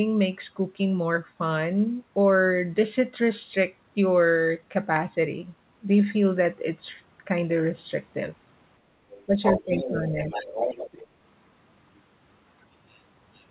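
At 9.12 s a faint second voice appears under the speech until 9.25 s. This is the other side's voice leaking through. The far end's loudspeaker sound likely reached the microphone, and the echo canceller left some of it behind. From 9.42 to 10.11 s and 10.3 to 11.07 s it returns, almost as loud as the speech.

Speech suppressed in double talk occurs in the same stretch. Both sides seem to talk at once, and the canceller likely turns everything down. The speech dips by about 10 dB at 9.26 to 9.34 s, about 15 dB at 9.53 to 9.71 s, and slightly at 9.88 to 10.3 s.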